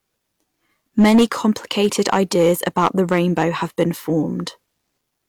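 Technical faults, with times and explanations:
0.99–3.45 s, hard clipping: the speech is pushed about 9 dB beyond what the stage can pass, so its peaks are sliced flat, giving a harsh fuzz on louder sounds. The waveform shows squared-off tops, and the spectrogram shows added harmonics smeared far upward.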